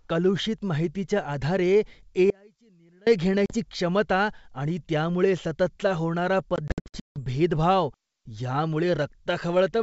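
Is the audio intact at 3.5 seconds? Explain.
No, packet loss on an ADPCM call strikes from 3.46 to 3.56 s. About 40 ms of a couple of packets drops to hard-edged silence, and the decoder's predictor and step size lose sync with the sender. The speech returns slightly distorted on "क्षमता आणि त्यामुळे सततचा".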